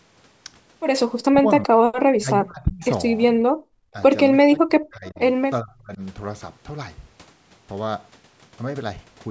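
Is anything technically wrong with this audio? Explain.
Yes. The audio has three kinds of fault, all tied to echo cancellation on a call.

Speech suppressed in double talk occurs at 1.28–1.75 s, 2.14–2.85 s, 3.93–3.97 s, 4.45–5.19 s and 5.61–6.01 s. The speech dips by roughly 40, 30, 5, 35 and 25 dB. This is likely an echo canceller pulling down the near talker while the far side spoke at the same time.

Background gated by the echo canceller appears at 3.45–3.65 s. The room sound drops by about 38 dB for about 200 ms, then returns. The canceller clamped the microphone hard while loudspeaker audio was playing, then released it.

An echo leak is audible at 5.06–5.20 s: a faint copy of the speech, 392 ms late and roughly 30 dB below it. Its likely cause is loudspeaker sound that the canceller failed to remove and sent back down the line.

The lack of content above 8 kHz comes from the call's microphone processing and is expected.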